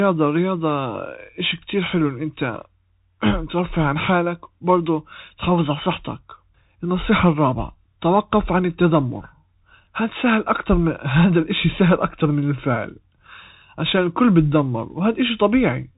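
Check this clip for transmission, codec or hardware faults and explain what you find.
One codec fault runs through the whole clip.

Bluetooth CVSD headset codec, throughout: each sample carries a single up-or-down bit, consistent with a 64 kbps stream, and the adaptive step cannot follow fast loud changes. Nothing passes above 3.8 kHz, s sounds turn scratchy, and a granular hiss sits under the speech.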